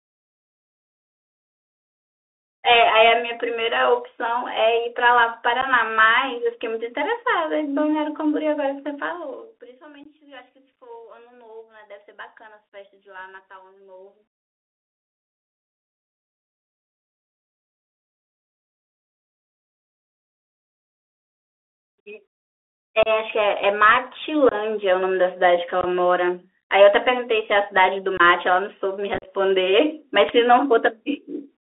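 Throughout the speech, the band is held to roughly 300 Hz to 3.6 kHz, and the sound has the grainy hiss and scratchy s sounds of the Bluetooth CVSD headset codec. A one-bit delta coder running at 64 kbps tracks the waveform with an adapting step, so loud high-frequency energy outruns it and breaks up. That grain is different from ordinary low-bitrate narrowband coding: it sits under everything as steady granular noise, not as warbling or swirling artefacts.

The first unconcealed Bluetooth headset packet loss comes at 5.61 s, an 11 ms hole. Between 8.96 and 9.81 s the level drops by roughly 25 dB in 3 dB steps at about ten per second, and each step lands as a small click. That is zipper noise. It stands apart from a clean fade because the fall ticks audibly rather than gliding.

Further packet losses follow at 10.04 s (19 ms), 23.03 to 23.08 s (30 ms), 24.49 to 24.54 s, 25.81 to 25.86 s, and 28.17 to 28.21 s, each losing about 22 ms. 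At 25.81 s the loss is split across 30 ms. The worst is 29.14 to 29.28 s, where about 68 ms goes missing in pieces spread over 105 ms, with the longest run 38 ms. Short blocks of headset-to-phone audio vanish and are replaced by silence or an idle pattern, leaving hard-edged gaps. The speech returns briefly quieter afterwards. Unlike concealed loss, nothing is smeared or repeated to fill the holes, and the scattered cluster near 29.2 s sounds chopped and crackly.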